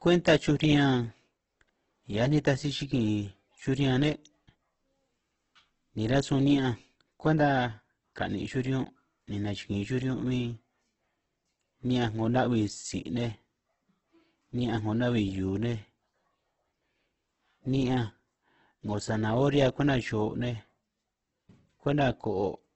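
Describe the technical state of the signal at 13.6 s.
At 13.6 s the speech is band-limited, with nothing above 8.2 kHz, and has a heavy grainy, rough texture, as it does for the whole clip. This is likely Opus compression in CELT mode, which fits a low bitrate near 12 kbps, where starved bands are refilled with noise.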